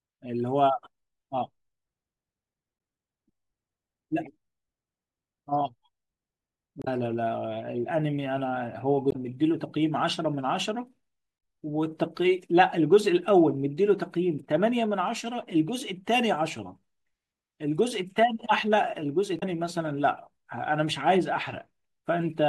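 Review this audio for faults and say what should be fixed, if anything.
Three brief bursts of damaged data in a compressed stream interrupt the speech at 6.81–6.88 s, 9.09–9.16 s and 19.37–19.43 s. Each lasts about 65–70 ms. Corrupted bytes leave the decoder unable to parse those frames, so it loses sync and produces a short glitch before recovering at the next valid header. To prevent this, verify file integrity with checksums and use error-checked transport or storage for the compressed stream.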